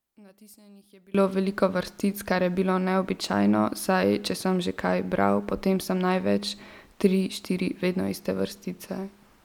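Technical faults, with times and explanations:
0.00–1.15 s, one channel inverted: the speech drops by about 29 dB to a faint residue, then returns at full level. The likely cause is one stereo channel with reversed polarity, so content common to both channels cancels when they are summed to mono.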